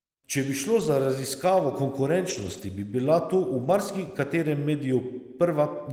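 Speech with three brief rough, noisier patches where the sound turns grainy but never drops out: 0.79 to 0.89 s just after "bi šlo", a longer one from 2.29 to 2.63 s just before "bi bila to v", and 3.63 to 3.73 s after it. This is a lost packet rebuilt from error correction: the decoder filled each gap with the low-bitrate copy carried in the following packet.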